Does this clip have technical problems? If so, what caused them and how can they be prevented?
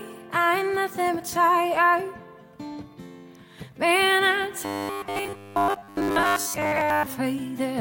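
Yes. From 4.65 to 7.06 s the sound takes on robotic sound from repeated short buffers: a rigid, metallic buzz fixed at 100 Hz. The likely cause is new audio arriving too seldom, so the software keeps replaying the last 10 ms while most of the real audio is skipped. Unlike plain dropouts, the gaps are filled rather than silent, and the steady pitch sets it apart from flanging. Larger buffers and steadier delivery would prevent it.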